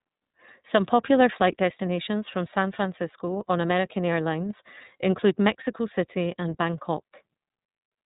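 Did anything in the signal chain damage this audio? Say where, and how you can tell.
Yes. The damage sits at the codec stage, and it runs through the whole speech clip. The sound is the iLBC codec at work. Nothing reaches above 3.8 kHz, so sibilants and breath lose their edge. The speech stays clear but sounds plainly rough and synthetic. iLBC codes each frame's excitation on its own, without leaning on the previous frame. The character fits 30 ms frames at roughly 13.3 kbps.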